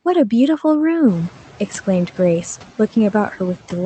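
Noise suppressor artifacts run through the whole clip. The suppressor treats the steady background as noise and pulls those bands down frame by frame, by only about 7 dB. The room noise pumps, dipping between phrases and swelling back under the speech. The room noise comes up around 1 s, by about 14 dB. The top end stops near 8 kHz, which fits a modest Opus call setting.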